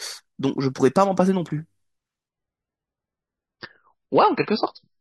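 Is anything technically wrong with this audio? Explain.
Yes. From 2.29 s to the end, the adaptive stream drops to a lower bitrate. The speech suddenly loses everything above 5.6 kHz and turns smeary, with no gap.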